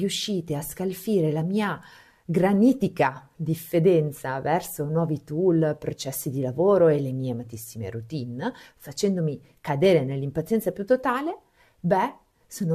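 No technical faults can be heard anywhere in this recording.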